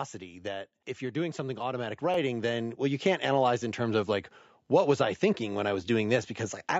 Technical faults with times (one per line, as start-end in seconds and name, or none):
0.05-0.75 automatic gain falling
0.85-4.22 automatic gain rising
2.14-2.16 overlapping chunks
4.66-4.68 overlapping chunks